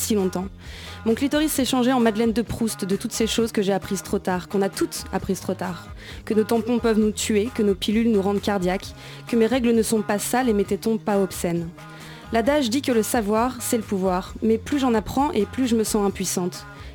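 At 11.51 s a tiny click cuts into the sound, too brief to register as a stutter. It's a repeated buffer: fresh audio arrived late, so the last block played once more. The repeat lasts about 1.5 ms, which fits a 64-sample buffer.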